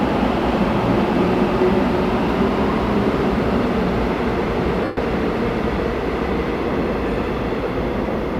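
At 4.84 s, lost LE Audio frames interrupt the sound for about 0.13 s, which fits roughly 17 lost frames of 7.5 ms. The LC3 decoder repeats the last spectrum with randomized signs, so the sound smears into noise and then fades toward silence before normal decoding resumes at 4.97 s.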